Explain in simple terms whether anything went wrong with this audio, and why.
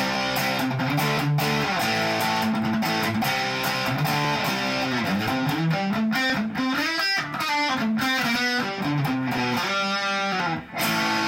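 Ticks come every 1.02 seconds, from 0.15 s to 10.4 s. These are periodic USB or driver dropouts. About a millisecond of audio is skipped each time.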